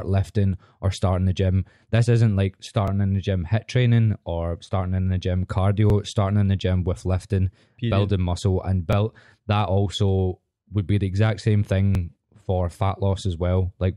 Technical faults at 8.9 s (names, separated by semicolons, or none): overlapping chunks